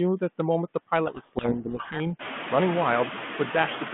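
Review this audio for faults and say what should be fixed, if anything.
Noise suppressor artifacts run through the whole clip. The suppressor decides frame by frame which frequency bands hold steady noise and pulls them down, here by only about 3 dB. The background therefore dips in the gaps and comes back up under the speech, so the noise floor seems to breathe with the talker. The effect is clearer after about 2.0 s, when the room noise rises by roughly 18 dB to sit about 9 dB below the speech. Tuning the suppressor for slower gain changes and a gentler per-band floor would keep the residual noise steady.

Codec payload misread from 1.06 to 2.01 s. The audio passes through G.726 at a clean telephone bandwidth of roughly 150 Hz to 3.4 kHz, with only light coding roughness that fits 32 kbit/s. In this stretch, though, the decoder unpacks each code word with its bits in the wrong order. 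Every sample difference it reconstructs is wrong, so the speech is buried under harsh, rasping distortion until the two ends agree on the packing again. Sender and receiver should be set to the same G.726 bit-packing convention, since the RTP and AAL2 orderings differ.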